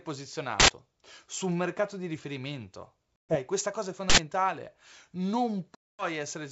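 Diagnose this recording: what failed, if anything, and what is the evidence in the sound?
At the driver or buffer stage, an uninitialised buffer was sent to playback twice before any audio had been written into it, so stale memory contents were played as samples. It shows up as a short, loud burst of digital noise from 0.60 to 0.68 s, just before "su un mercato di", and again from 4.10 to 4.18 s, right after "questa cosa è". Each burst lasts about 85 ms, which fits a 4096-sample buffer.

On the network side of this G.722 wideband telephone coding call, which runs at 64 kbit/s, there is packet loss on an ADPCM call. Lost packets were replaced by silence, and the receiver's adaptive predictor and step size drifted out of step with the sender's. After "un mercato di riferimento" a hard-edged hole of about 130 ms, roughly fifteen packets, opens at 3.16 s. The speech then comes back slightly distorted, settling by 3.37 s before "questa cosa è". 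A longer gap of about 240 ms, around twenty packets, starts at 5.75 s and recovers the same way by 6.06 s.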